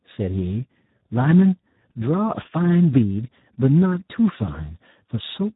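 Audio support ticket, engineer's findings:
Speex codec damage across the whole clip, heavy. Speech hoarse, noisy, edging robotic. The CELP excitation is starved of bits, consistent with an 8 kbps setting. Nothing above 3.8 kHz. Unlike a plain low-pass filter, the buzzy texture persists inside the remaining band.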